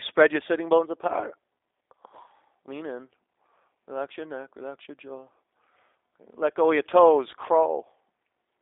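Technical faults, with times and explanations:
Throughout, G.729 codec. The speech is rebuilt from a modelled vocal tract, a pitch predictor and a few pulses per frame. This gives a plainly audible rough, synthetic edge. Only 300 Hz to 3.7 kHz survives, which fits an 8 kbit/s G.729 stream.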